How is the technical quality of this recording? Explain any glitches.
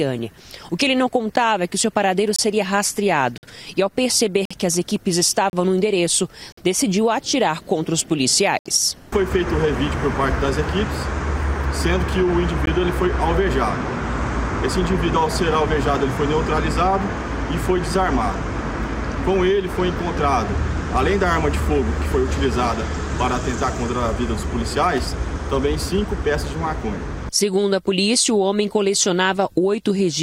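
The quality suffers from repeated dropouts. There's a gap between stream segments at 1.36, 2.36–2.39, 3.38–3.43, 4.45–4.51, 5.50–5.53, 6.52–6.57, 8.59–8.66 and 12.66 s, recurring roughly every 1 s segment. Each is a hard-edged silent hole, 10 to 66 ms long, where mismatched timestamps leave space the player fills with silence. Nothing is lost, just pushed later.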